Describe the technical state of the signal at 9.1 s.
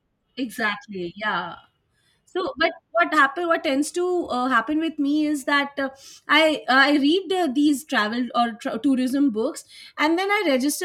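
At 9.1 s the speech signal is intact, with no audible fault at that moment.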